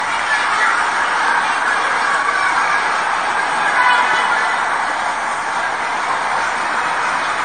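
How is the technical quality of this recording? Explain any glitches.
The quality's pretty compromised, and it stays that way the whole way through. What you're hearing is generation loss: the audio sounds swirly, smeared and hollow, transients come out blurred, and there's nothing above 15 kHz. That's likely from being run through AAC-LC around seven times, each re-encode quantising on a shifted frame grid so the noise and spectral gaps stack up. The top-end ceiling fits a 64 kbit/s chain.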